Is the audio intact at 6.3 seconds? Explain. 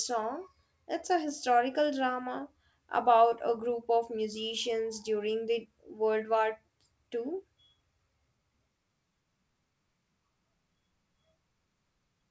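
Yes, the speech at 6.3 seconds is intact, with nothing breaking into it beyond the ordinary character of the call path, whose codec carries nothing above 8 kHz.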